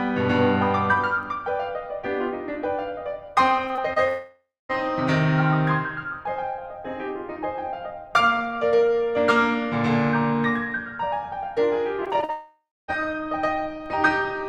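Short concealed packet loss hits the music three times, at 3.67 to 3.71 s, 3.75 to 3.79 s and 3.93 to 3.98 s. Each time about 20 ms of audio failed to reach the decoder, and the receiver bridged the hole by extending the preceding sound for 20 to 27 ms before blending back. The result is a quick smear or wobble rather than a clean gap, three small stumbles clustered inside a third of a second.

A long network dropout follows at 4.08 to 4.71 s. About 620 ms of the music is gone. What plays instead is a continuation of the last sound that fades away, leaving roughly the final 240 ms as silence before the music picks up again further along, with the missing passage skipped. The likely cause is a stall in which no packets arrived, so the concealment ran out and gave up.

Repeated packet loss (robotic sound) sets in at 12.05 to 12.30 s. Five separate holes, the longest 42 ms and about 100 ms in total, fall in quick succession, and roughly a third of that quarter-second is patched rather than real. 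Because each patch barely finishes before the next loss, the music turns choppy, with fragments dropped out.

That unsettled stretch runs straight into a second long network dropout from 12.30 to 12.90 s. About 580 ms is lost, the stretched tail dies away, and roughly 260 ms of silence sits before the music resumes. Again, the likely cause is the incoming stream stopping altogether.

A DC step at 13.86 s finishes the list. The waveform's zero line jumps abruptly, producing a low thump or click under otherwise continuous music. The offset then drains back toward zero at a rate matching a 5 Hz high-pass, so the thump is a single short event.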